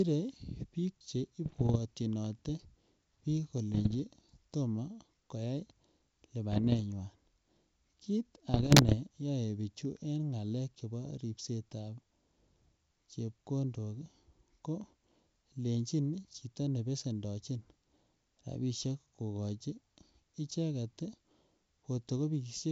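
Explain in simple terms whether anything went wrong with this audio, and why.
Four short patches of bit errors on an ADPCM link, at 1.44–1.77, 3.74–4.00, 6.52–6.80 and 8.54–8.95 s, come through as pops and rough, jumpy bursts. Each flipped bit throws the G.722 decoder's running level guess off, so the damage rings on briefly.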